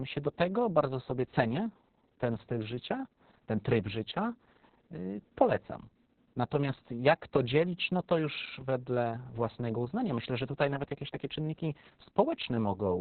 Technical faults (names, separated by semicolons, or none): Opus voice compression